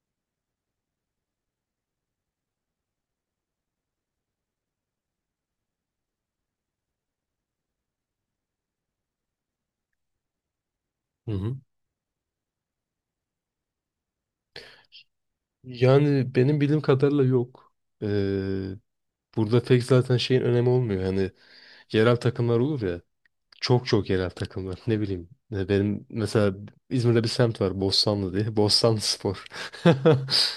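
A repeated buffer at 4.99 s in this speech clip: fresh audio arrived late, so the device replayed its last block of about 5 ms twice more, and the hard joins make a brief click or buzz rather than a stutter, with essentially no audio lost.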